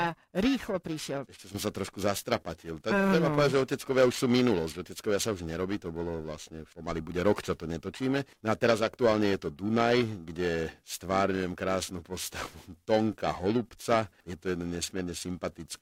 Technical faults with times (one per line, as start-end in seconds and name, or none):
0.00-15.82 periodic clock jitter